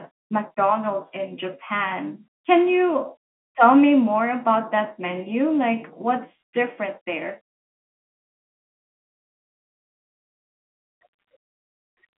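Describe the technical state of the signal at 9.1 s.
At 9.1 s the audio is intact, with the speech carried cleanly over what sounds like ordinary G.711 telephone coding, limited to the narrow telephone band of roughly 200 Hz to 3.4 kHz.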